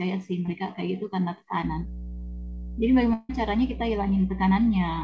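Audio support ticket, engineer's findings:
Short concealed packet loss, 0.46–0.49 s: brief smear in the speech where about 20 ms failed to reach the decoder in time. The jitter buffer/decoder extended the preceding sound to cover the gap, then crossfaded back into received audio.

Mains hum, 1.62 s to end of clip: steady 60 Hz tone with low harmonics, fairly prominent at roughly 10 dB below the speech. Points to a ground loop or a nearby transformer coupling the power line into the capture chain.

Long network dropout, 3.13–3.31 s: about 160 ms of audio missing, bridged almost entirely by a synthetic fill that continues the last sound and decays instead of falling silent. Likely cause is a burst of lost packets on the network; speech resumes afterwards without the lost section. The call path's bandwidth ends at 8 kHz, consistent with the G.722 wideband codec.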